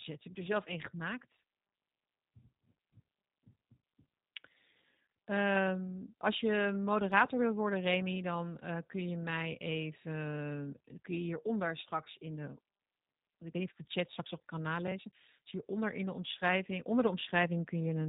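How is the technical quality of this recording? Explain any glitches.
The quality is limited by plainly audible low-bitrate speech coding throughout, with one brief dropout.

G.729 codec, throughout: the speech is rebuilt from a vocal tract filter, pitch predictor and a few pulses per frame, and everything above 4 kHz is gone. The damage is plainly audible as rough, slightly synthetic, band-limited speech, consistent with 8 kbit/s G.729A.

VoIP packet loss concealed by the speech codec, 12.04 to 12.08 s, between "even kun je hieronder" and "in de": about 20 ms of audio went missing, which fits two lost 10 ms frames. The decoder extrapolated from its last pitch and filter with falling gain, leaving a short stretched, fading patch that recovers over the following frames.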